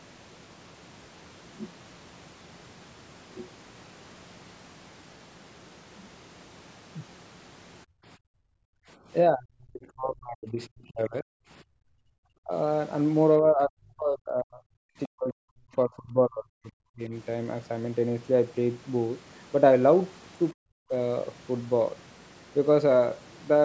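A speech recording where the room sound drops out from 7.85 to 8.98 s (by about 37 dB) and from 11.63 to 12.14 s (about 32 dB): background gated by the echo canceller as it clamped the microphone during loudspeaker playback. The talker's voice sinks by roughly 40 dB (about 35 dB at 12.42–12.53 s) or breaks up at 9.28–11.31, 12.42–12.53, 13.41–17.13 and 20.57–20.93 s, likely speech suppressed in double talk while both ends spoke at once.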